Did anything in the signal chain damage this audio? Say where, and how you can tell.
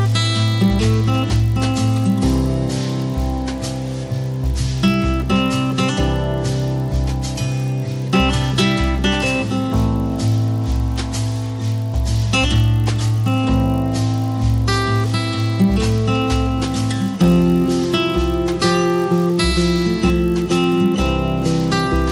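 Yes. The sample-rate conversion stage fails through a resampler restarted on every block: the 24 kHz to 48 kHz converter handles each 20 ms block in isolation, so at every block boundary it lacks the true neighbouring samples and leaves a small error. Those errors recur 50 times a second across the whole clip, which you hear as a 50 Hz buzz riding on the sound, present only while there is signal and gone in the gaps.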